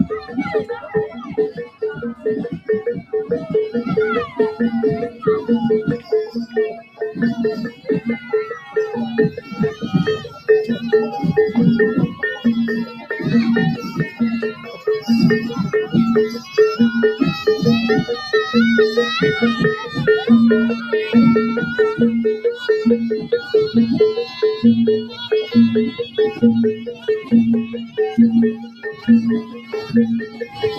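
A speech-oriented noise suppressor has been left running on material that is not speech. It treats sustained content and ambience as noise, so the level swings by roughly 10 dB as the gain reduction engages and releases. Transients pass largely intact, while held portions and decays are pulled down, which gives an audible pumping and thinning. Sound cut by the noise suppressor appears in six stretches: 0.2–3.13 s, with drops up to about 14 dB over around one and a half seconds in total; 4.27–10.49 s, up to about 13 dB over around two seconds; 12.09–13.11 s, up to about 10 dB; 14.1–16.55 s, up to about 10 dB; a brief dip at 23.17–23.32 s of about 12 dB; and 24.25–30.63 s, the deepest at about 16 dB, affecting roughly three seconds. In each stretch the sustained parts sink or have their tails truncated.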